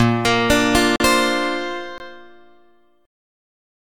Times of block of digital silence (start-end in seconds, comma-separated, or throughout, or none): 0.96-1.00, 1.98-2.00